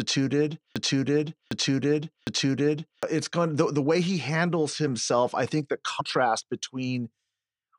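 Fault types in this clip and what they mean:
Broken-record loop: a stretch of about 0.76 s repeats exactly, back to back, three times, already under way when the clip opens and lasting until 3.03 s, just before "it's going the the". Likely the playback or stream stalled and resent its last buffered fragment, so the intended audio is lost.
Compressed frames skipped: at 6.0 s, right after "himself I think the", the audio jumps ahead by roughly 150 ms, about seven frames of 23.2 ms each.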